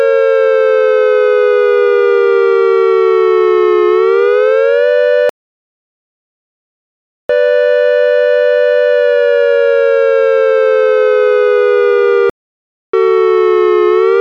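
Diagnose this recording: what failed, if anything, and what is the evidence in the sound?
Playback stage, with two playback stalls: the sound cuts to silence mid-flow at 5.29 to 7.29 s (2 s) and 12.30 to 12.93 s (0.64 s). The waveform shows flat, silent gaps, and the spectrogram shows blank vertical bands. Likely cause: the player ran out of data or its thread blocked.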